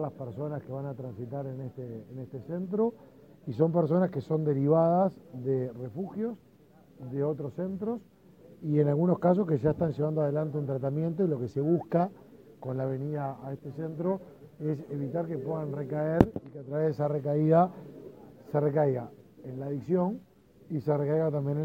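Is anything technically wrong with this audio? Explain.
Yes. From 10.21 s to 14.81 s there is periodic clock jitter. Interference is modulating the converter's sampling clock at a steady rate of around 1 kHz, so every sample is taken slightly early or late in a repeating pattern. That timing wobble puts sidebands roughly 1 kHz above and below each component of the sound, strongest on the high-frequency content, and the result is a rough, metallic edge laid over the audio that disappears in quiet passages.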